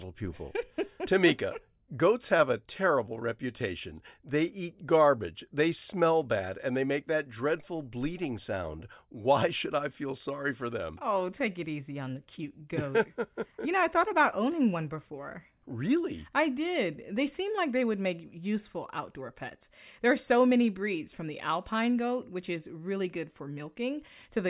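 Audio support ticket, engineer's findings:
No transport or processing fault found: the speech signal arrives continuous and intact, with no audible defect attributable to any component in the chain.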